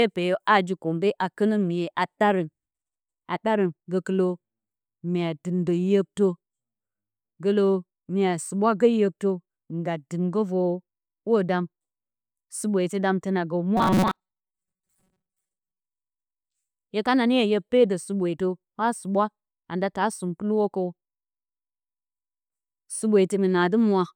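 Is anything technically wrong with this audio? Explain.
Yes. From 13.77 to 15.81 s, after "suɓweetɨ dam tǝna gǝ", the speech turns into robotic sound from repeated short buffers: a rigid metallic 188 Hz buzz, which fits a 5.3 ms chunk looping. Audio likely arrived too slowly, so about half was repeats.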